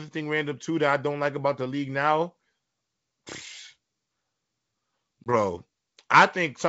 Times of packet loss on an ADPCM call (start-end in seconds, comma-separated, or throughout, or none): 5.24-5.35